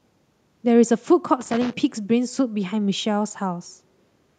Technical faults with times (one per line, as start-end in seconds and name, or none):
1.41-1.73 loose connector crackle